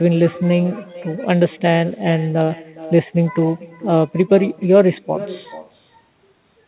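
With no echo canceller at the far end, the loudspeaker's output re-enters the microphone, so the speech returns roughly half a second later, about 17 dB quieter and thin. Clock drift between sender and receiver, with the sender running a few percent fast, keeps overfilling the jitter buffer throughout the speech, which is already narrowed to 4 kHz by the G.711 call path. From 0.04 s to 6.67 s, repeated timing corrections trim short pieces to hold the 104% pace, heard as unevenly spaced small hiccups and a slightly unsteady tempo.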